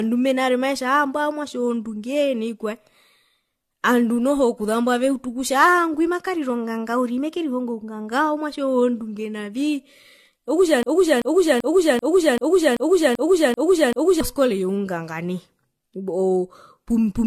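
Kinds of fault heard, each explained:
Generation loss: The speech sounds swirly, smeared and hollow, with blurred consonant attacks and nothing above 14 kHz, more degraded than one lossy pass would leave. This likely comes from about four successive AAC-style encodes near 64 kbit/s, each requantising on a shifted frame grid.
Broken-record loop: From 10.83 to 14.21 s, a 0.39 s fragment repeats exactly, back to back, nine times, and the speech that belonged in that span never plays. The likely cause is a stalled player, encoder or stream resending its last buffered piece.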